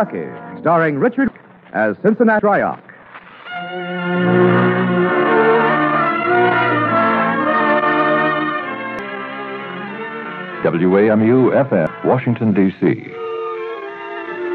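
Compressed frames skipped at 1.28, 2.39, 8.99 and 11.87 s: whole 92.9 ms frames never play, so the audio jumps ahead by roughly half a second, three tenths, half, then a fifth.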